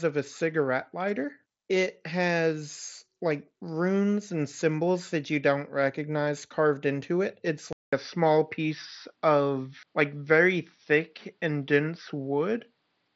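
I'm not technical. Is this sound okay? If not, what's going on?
No. At 7.73 s there's a brief gap, then the speech sounds duller and more muffled until the end, likely an input switched to a poorer device.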